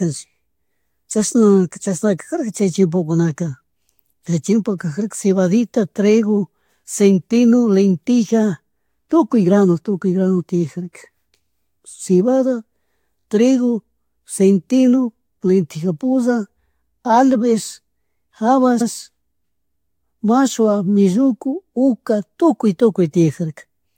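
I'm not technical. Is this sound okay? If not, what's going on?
No. The speech has repeated frames: small stored chunks got replayed. At 13.2 s, just before "trigo centeno", a 21 ms slice plays three times in a row, giving a quick stutter. At 18.8 s, an 85 ms slice plays twice, like a tiny skip-back.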